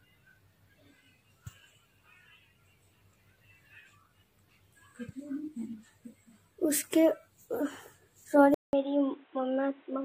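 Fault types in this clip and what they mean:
Input switched to a poorer device: at 8.54 s the sound cuts out for about 0.19 s, then returns through what is likely a different, lower-grade input, such as another microphone or a headset call profile. From that point to the end, nothing reaches above 3.9 kHz, so the top end turns dull and boxy, the level sits about 5 dB lower, and a new background noise appears roughly 35 dB under the signal.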